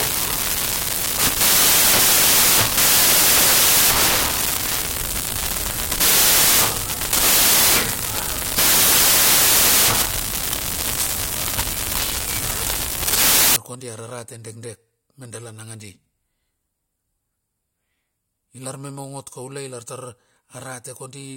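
A speech recording that from 0 to 13.56 s is buried under loud, hissing white noise. These are samples built from the wrong bytes: misaligned or swapped byte order turns each sample's rapidly changing low bits into its dominant part.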